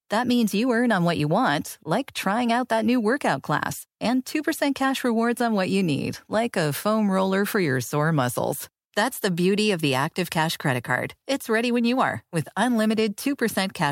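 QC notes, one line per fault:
No technical faults are audible in the speech signal, with level, continuity and frequency balance holding steady across the whole recording.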